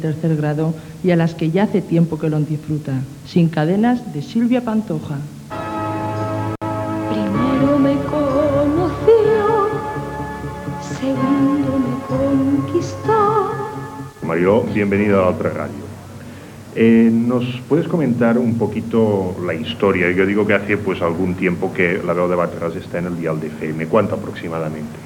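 At 6.55 to 6.63 s there is an intermittent contact. A loose cable or plug briefly opens. The sound drops out for about 62 ms. Crackles mark the break and the reconnection. Faint hiss remains while the line is open.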